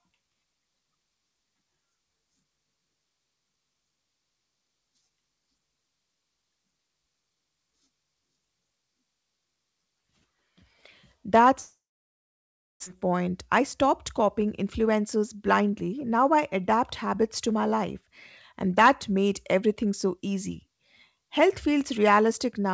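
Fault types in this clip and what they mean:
long network dropout: From 11.60 to 12.88 s the speech decays into a fading buzz or hiss and then about a second of silence, likely caused by a long run of lost packets. When sound returns, roughly one second of the speech is simply gone.
jitter buffer speed-up: From 13.06 to 15.76 s the receiver trims short pitch-period slices to drain its built-up backlog, so speech runs about 7% fast at unchanged pitch, shedding around a fifth of a second, all within the call path's 8 kHz bandwidth.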